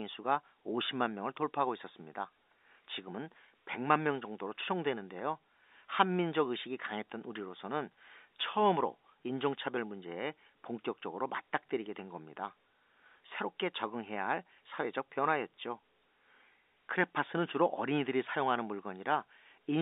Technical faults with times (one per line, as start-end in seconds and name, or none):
none